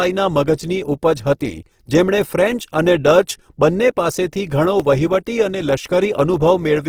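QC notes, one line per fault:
Throughout: Opus compression. The speech sounds rough and grainy, and the damage is plainly audible. The cause is likely Opus in its music mode, CELT, at a rate that fits about 16 kbps. With too few bits, the encoder keeps each band's energy but refills the band with folded lower content or noise. So few spectral holes appear, and tonal parts turn noisy instead. The bandwidth is not narrowed, with content reaching 20.3 kHz.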